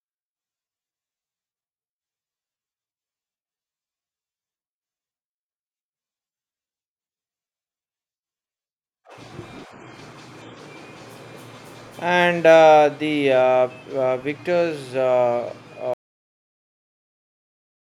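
At 15.94 s the speech ends in a cut-off end: the final buffers never played, so the waveform drops abruptly to flat digital silence, with no decay on the spectrogram.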